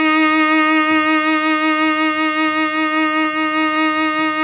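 Scattered short gaps run through this music clip from 2.76 to 3.84 s. Around seven brief holes, none longer than about 10 ms, were covered by carrying the preceding sound forward, filling roughly 70 ms in all and stretching the passage by about 13 ms. The result is small ticks and momentary smears in the music. The band-limited sound, with nothing above 4 kHz, fits a narrowband call codec such as G.711 mu-law.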